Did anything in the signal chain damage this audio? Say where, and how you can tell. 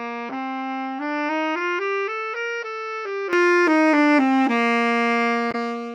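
Yes. From the start to 3.33 s the sounds are dull and about 10 dB quieter, with nothing above 6 kHz and a new noise floor roughly 40 dB down. At 3.33 s the band opens with no gap. This is likely an input switched to a poorer device at the capture stage. On a spectrogram, energy stops at a flat 6 kHz ceiling and then jumps upward.

A brief glitch from 5.51 to 5.55 s points to damaged data in a compressed stream at the codec or storage stage. The decoder misreads the corrupt frames, then resyncs at the next header. The waveform shows a 40 ms disturbance.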